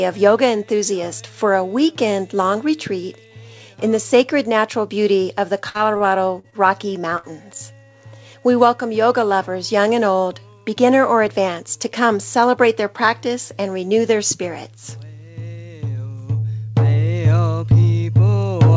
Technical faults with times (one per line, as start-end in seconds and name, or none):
5.69-6.55 repeated packet loss (robotic sound)
7.17-7.26 burst of packet loss